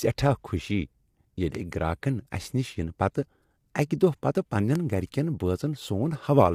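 Throughout, the speech sounds plainly rough and grainy, with noise between the harmonics, likely from low-delay AAC compression, consistent with AAC-ELD at around 32 kbps. From 1.55 to 1.57 s and again from 4.75 to 4.77 s, a single sharp loud pop sits over the continuing speech, about 10 dB and 15 dB above it. Each is likely a sudden voltage step or pulse added to the signal.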